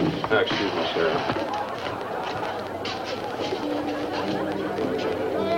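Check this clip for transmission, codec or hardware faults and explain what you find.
One fault is present, a train of clicks from 1.29 s to 5.53 s. Interference from nearby equipment or a faulty connection or power supply is the likely cause, injecting a pulse about 7.3 times per second at uneven spacing. Around forty similar ticks pop through the sound, peaking roughly 10 dB above it and staying audible in the pauses.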